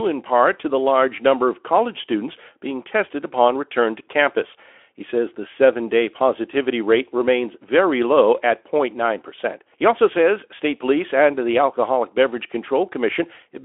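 Nothing is technically wrong with this speech clip, which is carried over a telephone-band Speex link working as intended.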